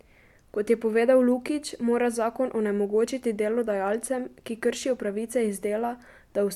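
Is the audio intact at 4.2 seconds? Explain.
Yes, the speech at 4.2 seconds plays through without any audible dropout, click, distortion or other technical fault.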